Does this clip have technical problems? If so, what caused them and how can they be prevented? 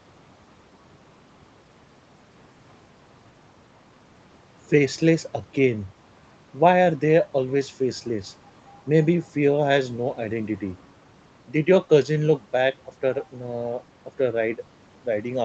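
No, this clip has no technical problems, so there is nothing to trace or prevent.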